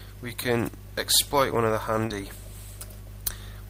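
At about 2.06 s there's a short concealed packet loss: roughly 30 ms of audio never arrived in time, so the receiver papered over it by extending the preceding sound for about 37 ms before blending back in around 2.11 s. You hear it as a quick smear or wobble.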